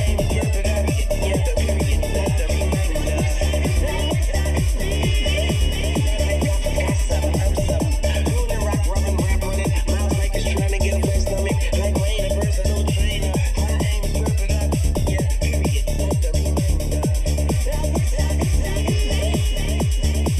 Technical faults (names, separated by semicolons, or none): channel delay (comb filtering)